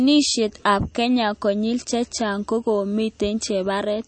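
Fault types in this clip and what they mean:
MP3 compression: The speech sounds dull and watery throughout, with nothing above 8.4 kHz and a swirly, unstable texture on the quieter parts of the sound, so the damage is plainly audible. This is likely low-bitrate MP3 encoding, consistent with roughly 34 kbps. With so few bits, the encoder cuts off the treble at a fixed point and drops weak frequency components, which flicker on and off between frames and blur sharp onsets.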